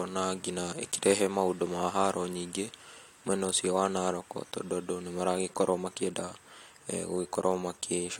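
No technical faults can be heard in this recording.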